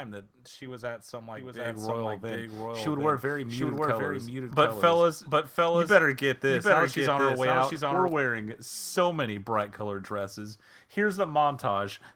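A doubled audio track runs from 1.36 to 8.08 s. A second copy of the speech follows about 0.7 s behind, roughly 5 dB quieter, starting and stopping abruptly, likely from a duplicate capture path. Microphone volume stepped up at 1.65 s: the input gain was raised by about 6 dB in one step, so speech and background jump louder together.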